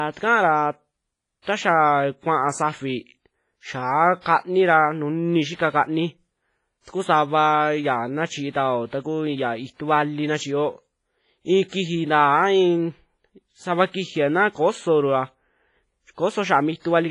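WMA compression runs through the whole recording. The speech is heavily damaged: nothing survives above 10.6 kHz, and a washy, ringing haze hangs over it, with hiss that swells and fades with the signal. The likely cause is a Windows Media Audio encode with long transform blocks. At this starved setting, which fits a bitrate around 24 kbps, weak spectral detail is discarded and quantisation noise smears across tens of milliseconds.

Pre-echo occurs at 1.42 s (about 51 ms of spread), 4.21 s (45 ms), 5.56 s (28 ms), 8.50 s (47 ms) and 11.68 s (40 ms). At each of these points, a brief hiss arrives just before a sharp onset, and the attack itself sounds blunted and smeared. This happens because the codec spreads its quantisation noise over the entire block. Noise sized for the loud onset therefore spills into the quiet gap that precedes it.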